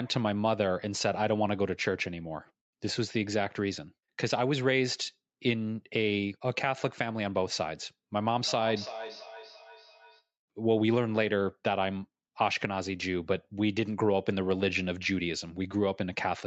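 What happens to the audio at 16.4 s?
Nothing goes wrong at 16.4 s: the speech carries on intact there, with only the ordinary call microphone processing shaping it, its content stopping around 8 kHz.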